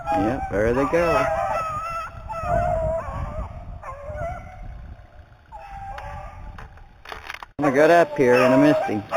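The audio was raised to a higher sample rate by straight-line interpolation between samples, and this imaging from linear upsampling runs through the whole clip. A straight-line join is a weak filter. It leaves the top of the original band dulled and lets mirrored copies of the spectrum through, the first sitting between 4 kHz and 8 kHz at roughly 30 dB below the signal, which fits a source at 8 kHz converted to 48 kHz. Those images add a faint metallic shimmer above the muffled top end.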